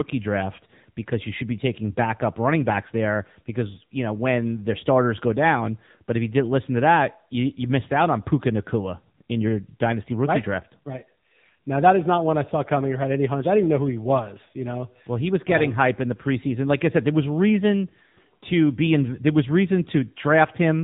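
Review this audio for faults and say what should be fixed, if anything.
AMR narrowband mobile codec damage throughout: nothing above 3.8 kHz, and a buzzy, synthetic vocal-tract resynthesis fitting the 7.95 kbps mode, unlike a plain low-pass filter's clean dullness. Prevent it by recording or transferring over a wideband path rather than a narrowband mobile call.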